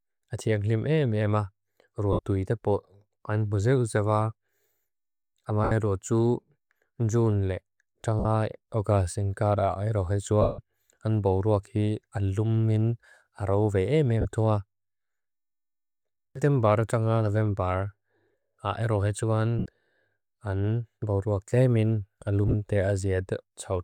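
Speech drops into a brief noisy smear at 2.13 s (60 ms, before "tuita pot"), 5.64 s (75 ms), 8.19 s (about 50 ms, before "oga sengkara"), 10.41 s (165 ms, before "an boruak hi alum"), where the smear sinks toward silence, 14.21 s (about 40 ms), 19.59 s (about 70 ms) and 22.47 s (scattered short gaps over 60 ms). These are lost LE Audio frames: the LC3 decoder refilled each gap by replaying the last spectrum with randomised signs, fading it as the loss ran on.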